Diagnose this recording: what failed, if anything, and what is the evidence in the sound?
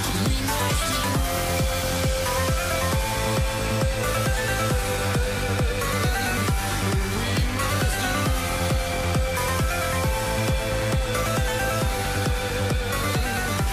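Nothing in the recording points to a failure at any stage of the chain, and no fault can be heard at any point.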